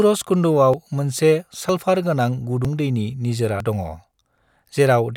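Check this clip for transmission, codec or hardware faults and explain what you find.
One fault appears: audio missing between chunks. At 0.74, 1.69, 2.65 (just before "दैनि निजिरा दङ") and 3.60 s (just after "दैनि निजिरा"), the speech skips forward. About 40 ms vanishes each time, with no gap left. The likely cause is audio lost at each roughly one-second chunk boundary.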